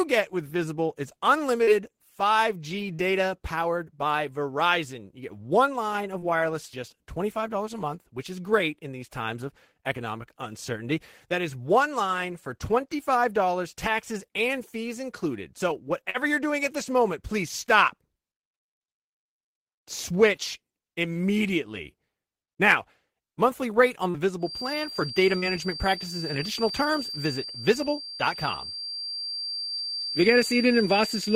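Brief smears and small wobbles break into the speech at 1.63, 2.95, 6.19, 16.1 and 24.1 s, each lasting a few hundredths of a second. This is short concealed packet loss. About 40 ms of audio failed to arrive at the decoder in time, and the receiver bridged each gap by extending the preceding sound for roughly 34 to 40 ms before rejoining the real signal. That stretch of synthesized continuation is what makes each moment sound slightly smeared.

From 24.38 s to the end of the clip, a thin, steady whistle at 4.7 kHz sits behind the speech, swelling and fading slowly in level and staying about 10 dB below it. This is a feedback whistle. Its likely cause is a loudspeaker-to-microphone loop hovering at the edge of feedback, so that one high frequency keeps ringing without building into a full howl. The same packet-loss smearing occurs twice more underneath the whistle, at 25.38 and 29.62 s, again filling roughly 40 ms each time.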